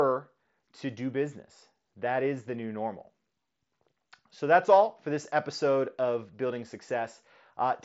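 No technical faults are present in this speech, which comes through a Bluetooth mSBC headset link whose wideband limit leaves nothing above about 7.7 kHz.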